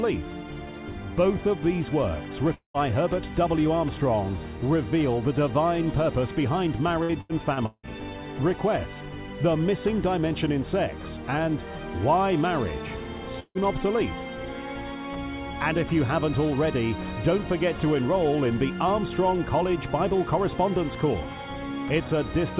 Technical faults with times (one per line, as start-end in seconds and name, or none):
2.54-2.77 long network dropout
7.03-7.91 repeated packet loss (robotic sound)
13.40-13.58 long network dropout